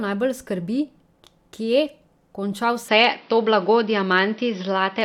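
At 2.89 s the speech suddenly goes duller and boxier and stays that way to the end, with nothing above 5.9 kHz. The level shifts by around 5 dB, and a new noise floor sits roughly 35 dB down, with no gap at the change. That's likely the input switched to a poorer device.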